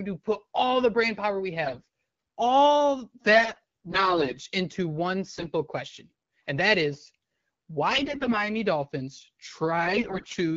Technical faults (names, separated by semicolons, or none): AMR bit errors